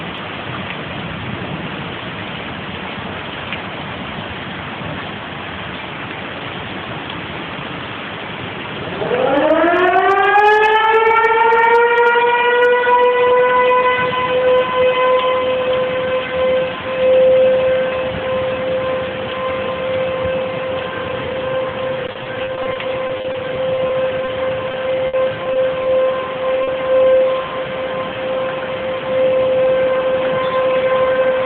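Around 22.07 s the audio starts breaking up with repeated packet loss, giving that robotic sound until about 24.29 s. Packets keep arriving late or not at all, and each hole gets patched by stretching the last bit of sound. About fifteen short gaps, none longer than 30 ms, add up to roughly 14% of the stretch being filled in, so it comes out choppy. After a brief clean patch, the same thing returns from 24.71 s to 25.87 s. This time there are fewer gaps, but one runs to 60 ms, and about 12% of that span is concealed.

Then at 26.63 s there's a short concealed packet loss lasting about 40 ms. That chunk never reached the decoder in time, so the receiver papered over it by extending the preceding sound and blending back into the real audio. You hear it as a quick smear or wobble rather than a clean cut.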